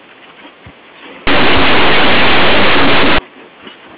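From 1.27 to 3.18 s the speech turns into harsh, very loud distortion. This is linear audio read as companded: plain linear 8-bit samples are expanded as mu-law codes, so small values just on one side of zero become the loudest outputs.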